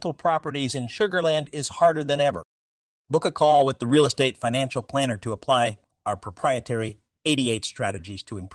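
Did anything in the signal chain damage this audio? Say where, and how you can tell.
No, nothing in this speech stood out as damaged on listening.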